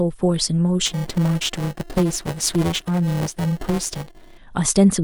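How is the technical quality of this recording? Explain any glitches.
The recording has one significant fault: buffer tearing from 0.86 s to 4.38 s. The software writing the playback ring buffer and the hardware reading it have drifted into each other, so they cross within every period. About a third of each buffer holds stale audio from a few milliseconds earlier, spliced in with hard edges. The result is a steady robotic buzz at 345 Hz, which fits a 128-sample buffer, riding on the speech wherever there is signal.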